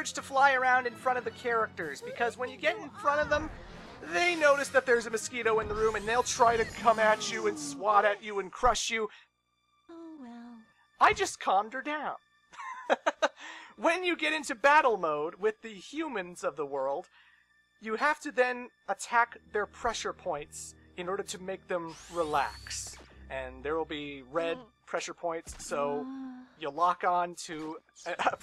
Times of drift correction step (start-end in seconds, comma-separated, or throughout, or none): 0.41-2.83, 6.42-8.50